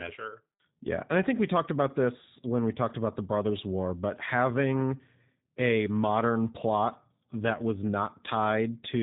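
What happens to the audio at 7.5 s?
At 7.5 s the speech carries G.729 codec damage, present throughout: rebuilt from a vocal-tract filter, pitch predictor and sparse pulses at roughly 8 kbit/s, it sounds rough and synthetic, with nothing above 3.8 kHz.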